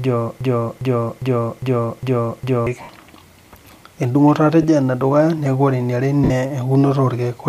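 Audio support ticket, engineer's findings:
Broken-record loop, 0.00 to 2.67 s. Already running when the clip opens. A 0.41 s fragment repeats exactly, back to back, six times. Audio due in that window never plays.

Probable component: playback or stream buffer. Likely stall, with the last held fragment resent until data resumed at 2.67 s.

Lost LE Audio frames, three dropouts. 2.82 to 2.89 s, about 70 ms. 4.62 to 4.65 s, about 20 ms. 6.24 to 6.31 s, about 60 ms.

Symptom: tonal content smears into noisy hiss, then fades. Component: Bluetooth LE Audio link, LC3 decoder concealment. Mechanism: the decoder repeats the last spectrum with random signs. Gap lengths fit runs of 10 ms LC3 frames. Likely LC3 coding elsewhere carries light codec texture.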